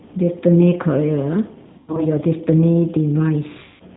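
G.729 codec damage runs through the whole speech clip, and it is plainly audible. The sound fits an 8 kbit/s G.729 encoding: each 10 ms frame is rebuilt from a vocal tract filter, a pitch predictor and a handful of pulses, so the voice comes out slightly rough and synthetic. Nothing above 4 kHz survives, which leaves the speech dull and band-limited.

VoIP packet loss concealed by the speech codec first appears from 1.78 to 2.03 s. About 140 ms of audio is missing, scattered over roughly 200 ms, and the longest gap is about 100 ms. The gaps fit 20 ms packets. The decoder fills each hole by stretching its last pitch and filter settings at falling gain, so the speech smears into a fading artificial sound. Because each frame builds on the one before it, the voice stays weak or distorted for a short while after the losses end.

A second concealed loss follows from 3.64 to 3.83 s. About 160 ms is missing here, so the extrapolated sound decays further toward silence before real audio returns near the end of the clip.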